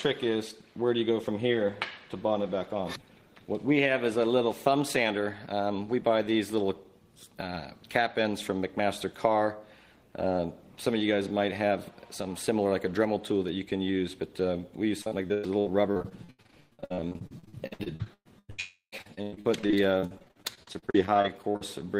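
From 15.01 s to 18.60 s the audio breaks up into repeated packet loss with a robotic sound. Dozens of short holes, the longest about 113 ms, are patched by repeating the last sound. About 41% of this stretch is that patching, so it sounds choppy. On a spectrogram the harmonics turn into short, flat, repeated blocks with sudden edges. The waveform shows abrupt joins where the missing pieces should be.

At 18.60 s the sound stops reaching the listener for about a third of a second. This is likely a long network dropout. For roughly 320 ms the last sound is stretched into a buzzy tail that fades, and then about 120 ms of near-silence follows before the audio returns at 19.09 s without the lost part. On a spectrogram this appears as one smeared horizontal band that dims into a blank column. The waveform shows a decaying envelope and then an almost flat line.

From 18.98 s, just before the dropout ends, to 21.63 s the repeated packet loss comes back. 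The gaps are up to about 97 ms long and make up about 30% of this span, so the choppy, robotic quality returns. It shows the same blocky, repeated segments on the spectrogram as the first stretch.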